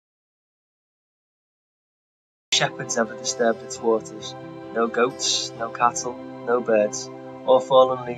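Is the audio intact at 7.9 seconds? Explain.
Yes, at 7.9 seconds the audio is intact, with no dropout, click, distortion or other fault audible at that moment.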